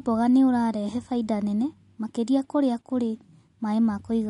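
From start to finish the speech has a watery, swirling texture, and s sounds pick up metallic chirps as faint detail flickers in and out between frames. Nothing is heard above 11.1 kHz, so the top end sounds dull and clipped. These are the marks of MP3 compression, likely at a low bitrate around 47 kbps. The encoder ran short of bits, cut the treble at a fixed point and zeroed weak frequency lines.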